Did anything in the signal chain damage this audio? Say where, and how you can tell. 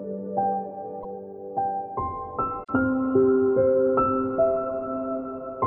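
Yes, at the codec stage: damaged data in a compressed stream. Brief glitches at 0.98 to 1.05 s and 2.63 to 2.70 s. The decoder misreads corrupt frames and resyncs.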